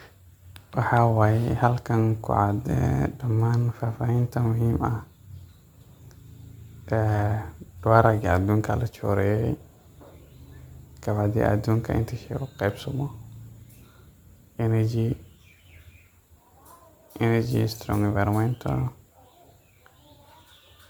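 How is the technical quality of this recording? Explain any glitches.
The quality is noticeably degraded, and the problem runs through the whole recording rather than showing up as separate glitches. Across the full clip the speech sounds swirly and hollow, with a watery smear on sustained sounds and consonant attacks that have lost their edge. That pattern is generation loss, most likely from the audio being decoded and re-encoded as MP3 around ten times. The character points to something near 128 kbit/s, a rate that on a single pass would sound far cleaner. Each round quantises the signal again on a frame grid that no longer lines up with the last one, so the noise and the dropped spectral patches stack up. That's why it sounds more washed out than the bitrate suggests, even though the top end still reaches about 20 kHz.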